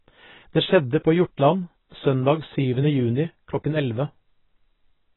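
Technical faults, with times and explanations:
Throughout, AAC compression: the speech is dull and smeared, with nothing above 3.9 kHz and a warbly, fizzy texture on sibilants. That is likely AAC-LC at a very low rate, around 16 kbps, so the encoder drops the top band and coarsely quantises the rest.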